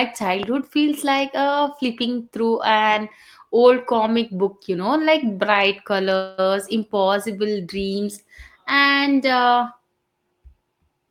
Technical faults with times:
0.43-0.45 loud pop
6.15-6.43 call audio freeze

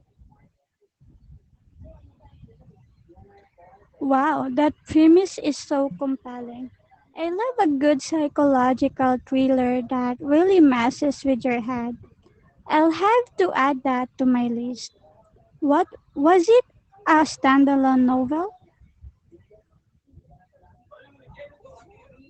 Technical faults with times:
0.00-22.30 Opus voice compression

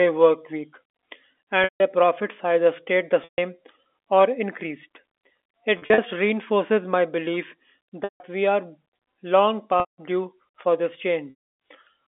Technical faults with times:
1.64-1.80 packet loss with pitch repetition
3.24-3.38 packet loss with pitch repetition
5.78-5.98 packet loss with pitch repetition
8.04-8.20 packet loss with pitch repetition
9.80-9.98 packet loss with pitch repetition
11.30-11.53 packet loss with pitch repetition

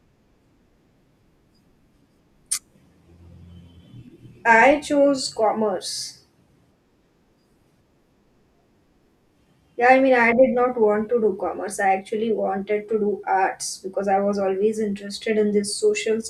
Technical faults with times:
none

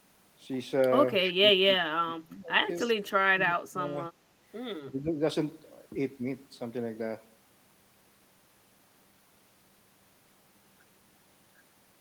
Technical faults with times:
1.24-1.28 echo leak
1.35-2.80 speech suppressed in double talk
2.79-2.90 echo leak
3.05-3.97 speech suppressed in double talk
4.90-5.19 speech suppressed in double talk

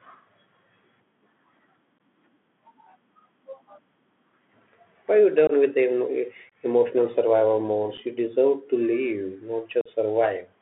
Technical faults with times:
0.00-10.61 Bluetooth CVSD headset codec
1.98 unconcealed Bluetooth headset packet loss
5.47-5.52 unconcealed Bluetooth headset packet loss
6.50-6.54 unconcealed Bluetooth headset packet loss
7.97 unconcealed Bluetooth headset packet loss
9.81-9.88 unconcealed Bluetooth headset packet loss

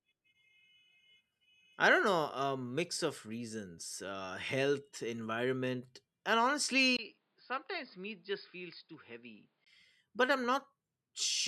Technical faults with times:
6.97-9.66 input switched to a poorer device

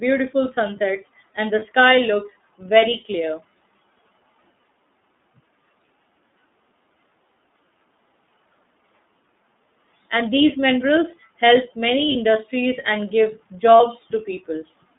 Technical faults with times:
0.00-14.98 iLBC codec
1.59-1.63 lost iLBC frames
12.11-12.15 lost iLBC frames
13.77-13.81 lost iLBC frames

